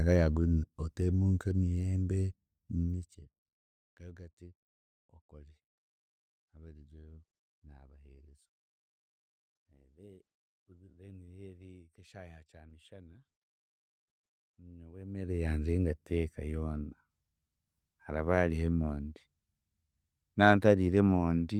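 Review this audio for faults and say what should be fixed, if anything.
Nothing needs fixing: the speech signal shows no technical faults anywhere in the clip.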